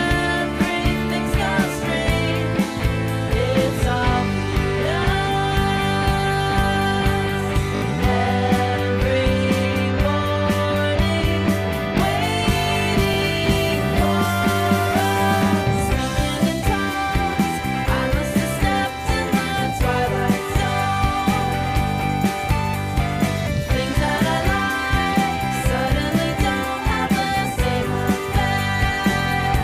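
At 7.76 to 7.82 s and 11.98 to 12.0 s, late audio made the device replay its last block, a repeated buffer, which fits a 20 ms buffer. Each replay produces a hard join. The first repeats three extra times, losing roughly 70 ms, and the second repeats once.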